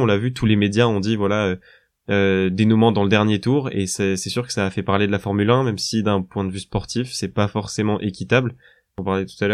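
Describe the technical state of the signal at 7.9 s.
At 7.9 s the signal is intact, with no audible fault.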